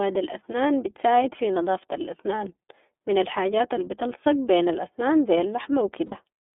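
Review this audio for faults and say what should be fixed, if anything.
The whole recording passes through the iLBC codec, and its damage is plainly audible. The band runs only from about 250 Hz to 3.5 kHz, so the speech sounds thin and telephone-like. Each 30 ms frame is coded on its own. That leaves a slightly rough, synthetic edge on the voice. The sound fits iLBC's 13.33 kbps mode. To prevent this, record or send the speech with a wideband codec such as Opus instead of iLBC.

From 6.06 to 6.16 s there are lost iLBC frames. About 60 ms of audio is missing, which fits two dropped 30 ms frames. The decoder fills the gap by repeating the last pitch cycle with some noise mixed in. It sounds like a brief held, slightly buzzy vowel. Clean speech returns almost at once, because each iLBC frame decodes independently. To prevent this, carry the stream over a more reliable network path or add forward error correction.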